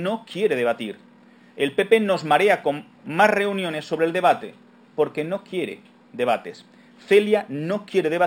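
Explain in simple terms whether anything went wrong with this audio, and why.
The top end sounds dull throughout, yet there's a faint metallic shimmer on hissy, bright sounds. This is imaging from linear upsampling. The audio began at a low sample rate of 12 kHz and was converted to 48 kHz by joining the original points with straight lines. That simple smoothing is a weak filter. It rounds off the highest detail and leaves faint mirror copies of the sound just above 6 kHz, where the original audio stopped, and that is the shimmer.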